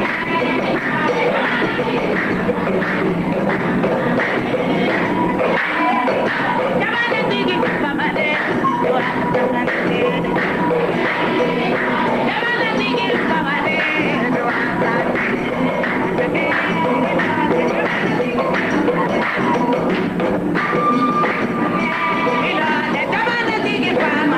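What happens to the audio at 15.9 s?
Nothing goes wrong at 15.9 s: the audio plays through that moment intact, with no dropout, click, glitch or other audible fault.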